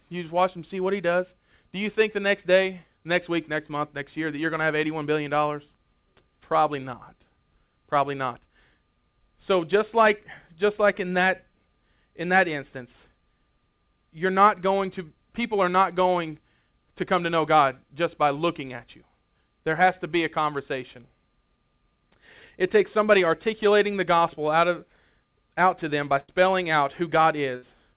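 A burst of packet loss hits this speech recording twice, at 26.2 to 26.3 s and 27.56 to 27.64 s. The receiver carries the last sound forward and fades it, giving a held buzz or dying hiss for about 80 ms and then 60 ms, after which the audio jumps ahead with the stretch in between gone. Throughout, nothing is heard above 4 kHz, which points to a G.711 mu-law call path.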